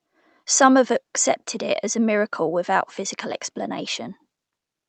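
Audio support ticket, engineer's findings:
No faults found in the speech signal; it arrives over the call path with audio content extending to about 8 kHz, consistent with an Opus wideband setting.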